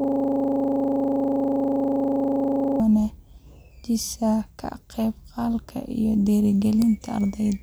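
From the start to 2.8 s, a system hang loop is already under way. The system froze while the sound hardware kept replaying one 40 ms buffer. At 25 repeats a second it makes a rattling buzz, and unlike a stutter, every cycle is identical.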